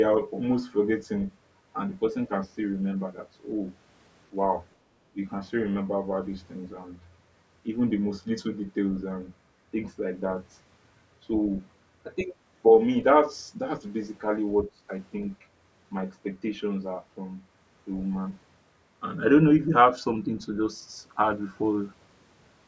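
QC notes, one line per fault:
0.23–0.29 s and 12.18–12.24 s, other side's voice leaking through: two brief scraps of a second, fainter voice sit under the speech, the first roughly 30 dB down and the second nearer 20 dB down, so the later one is easier to catch. This is likely loudspeaker echo that the canceller did not fully remove. On a spectrogram it shows as faint, thin harmonic traces that do not line up with the main talker's formants; the waveform barely changes.
5.13–5.17 s and 14.65–14.7 s, speech suppressed in double talk: the talker's level dips for a few tens of milliseconds each time, sharply at 5.13 s (roughly 15 dB) and mildly at 14.65 s (a few dB), giving a brief dip. The likely cause is the echo canceller ducking everything while both sides spoke. The waveform shows a short notch in the envelope, and the spectrogram shows a narrow vertical band of fading energy below the 8 kHz ceiling.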